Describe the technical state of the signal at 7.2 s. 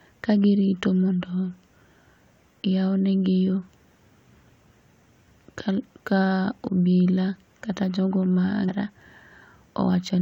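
At 7.2 s the speech signal is intact, with no fault audible at that moment.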